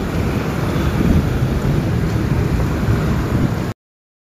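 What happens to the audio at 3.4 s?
At 3.43 s, lost LE Audio frames leave a brief gap of about 15 ms that the LC3 decoder fills by replaying the previous spectrum with random signs. Unlike a silent dropout, it sounds like a short noisy smear.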